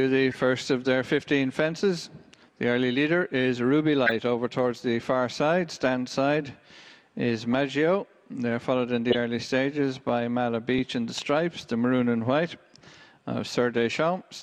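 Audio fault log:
0.19 to 14.26 s, clock slip clicks: faint ticks roughly every 0.4 s, about thirty in all, likely from two unsynced clocks drifting around 50 ppm and slipping a single sample each time.
0.31 to 0.38 s, 4.06 to 4.11 s, 9.10 to 9.19 s and 10.78 s, corrupt frame decoded: damaged frames played anyway, giving chirpy bursts of misplaced energy peaking around -25, -5, -10 and -15 dBFS.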